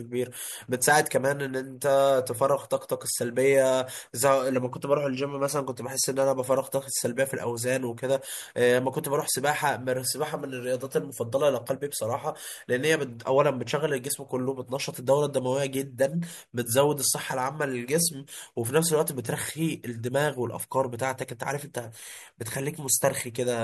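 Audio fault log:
Nothing to log here; this speech recording shows no technical faults anywhere.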